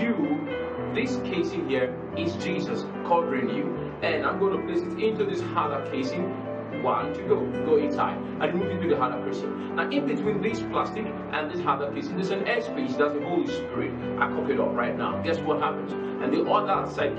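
Nothing in the signal points to a technical fault: no interruptions, level problems or playback errors can be heard at any point in the audio.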